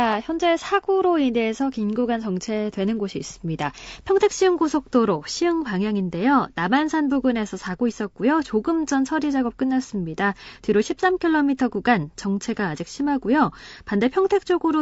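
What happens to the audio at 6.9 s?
At 6.9 s, as throughout, the speech sounds rough and grainy, likely from low-delay AAC compression. Its short frames blur pitch harmonics, leaving noise between them rather than steady hiss.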